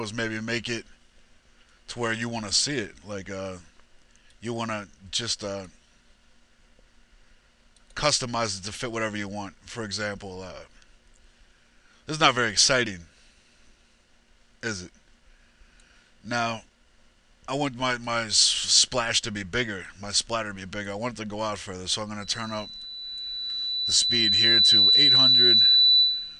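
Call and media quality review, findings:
Loudspeaker feedback squeal, 22.21 s to end of clip (26.39 s): mic re-captures the loudspeaker it feeds, loop gain exceeds unity at 4 kHz. A steady 4 kHz tone swells over about 3 s, then holds roughly 10 dB above programme.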